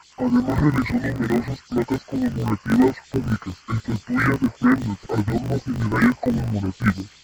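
Throughout, the speech sounds an octave low, dull and robotic, buzzing at 50 Hz: interleaved audio read as planar, each 20 ms block split into halves played at half speed.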